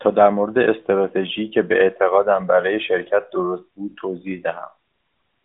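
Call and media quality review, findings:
No faults found: speech carried over the AMR-NB narrowband mobile codec at 12.2 kbps, line band 200 Hz to 3.7 kHz with no content above 3.8 kHz, and only light codec colouring as expected at that rate.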